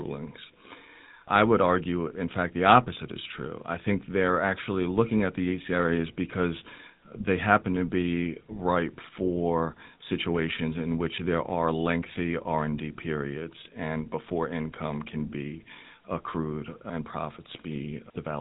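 A buzzy, gravelly roughness runs through the speech from start to finish, and the sound is dull, with nothing above 3.9 kHz. This is the GSM full-rate codec, which fits a 13 kbps bitrate. It rebuilds the voice from a vocal-tract model excited by sparse, regularly spaced pulses.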